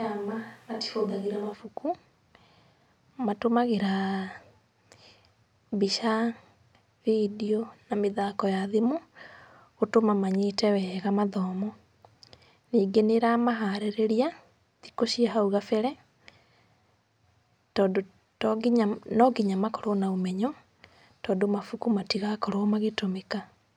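Right from the start until 1.52 s, the speech sounds roomy and hollow, thin in the bass, about 5 dB quieter, with room noise about 30 dB below it, then snaps back to close sound. That's likely a switch to a distant microphone.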